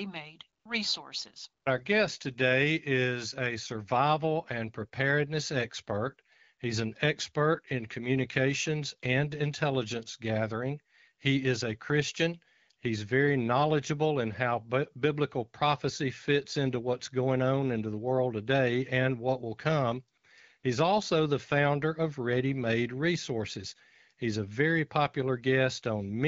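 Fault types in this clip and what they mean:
AMR comfort noise: during short pauses the phone stopped sending speech frames, and the receiver filled each 20 to 60 ms gap with smooth synthetic noise, twice just after "and what will come". Unlike a dropout, these gaps hold steady hiss rather than dead silence.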